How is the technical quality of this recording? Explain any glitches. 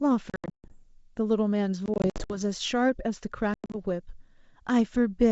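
The recording has three bursts of dropouts, over wideband audio with faint upper-band hiss that fits G.722 coding. Packet loss on an ADPCM call, at 0.30–0.75 s, 1.86–2.38 s and 3.54–3.77 s: scattered packets vanish as hard-edged silent gaps, the longest about 140 ms. The decoder's predictor and step size then lose track of the sender's, so speech returns slightly distorted before settling.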